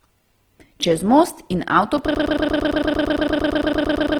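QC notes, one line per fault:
throughout: Opus compression. The whole clip has a grainy, noisy roughness on the speech where tones should be clean. That's the likely cause: Opus in its music mode keeps each band's energy but fills bands it can't afford by folding lower ones or with noise, so you get grit rather than swirl. The damage is plainly audible, which points to a low bitrate around 16 kbps. Bandwidth stays full, with content reaching up to about 20.2 kHz.
1.98 s: block of digital silence. There's a dropout of under 4 ms where the output goes to zero and snaps back with no fade. At that length you don't hear a hole; it comes across as a tick or quick dip. A block of zeros like this usually means the output buffer wasn't filled in time, though an invalid calculation can produce the same thing.
2.15 s to end: broken-record loop. From here the same 113 ms fragment plays back to back, 18 times, right up to the end of the clip, giving a stuttering, machine-gun repeat. 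This is likely a stall in the player, encoder or stream, which kept resending the last piece it held. Whatever audio belonged in those last two seconds is gone.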